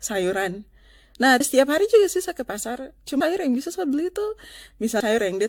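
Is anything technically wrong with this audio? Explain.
Yes, two problems are audible in this speech.

Generation loss runs through the whole clip. The sound is swirly, smeared and hollow, attacks blur, and nothing remains above 18.8 kHz. This is likely from AAC-LC encoding repeated about five times at roughly 100 kbit/s, with fresh quantisation on each pass.

Audio missing between chunks shows up as abrupt skips at 1.40, 3.20 and 5.00 s. Each drops about a fifth of a second and splices the two sides straight together. The cause is likely a 2-second chunked process losing audio at each handover.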